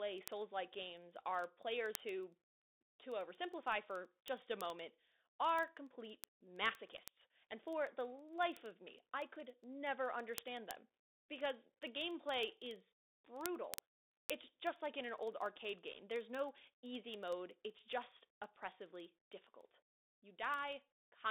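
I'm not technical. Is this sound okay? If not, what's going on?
No. Two separate faults run through this speech.

The whole clip sounds thin and boxy, as if heard through a cheap phone: the low body and the upper brightness are gone, with only a band from about 250 Hz to 3.7 kHz left. S sounds turn scratchy, louder moments break up, and a grainy hiss sits underneath. That is the Bluetooth CVSD headset codec, the basic call mode of wireless headsets. It squeezes sound into a simple up-or-down signal, which can't follow fast or high sounds cleanly.

On top of that, from about 0.14 s to 21.29 s there is a steady run of small ticks, roughly twenty a second, some sharper than others. These are word clock ticks. Two pieces of digital equipment passing audio between them are running on slightly different internal clocks, here apart by something like 400 parts per million. Every time they drift out of step, a single sample is lost or doubled, and each slip makes one tick.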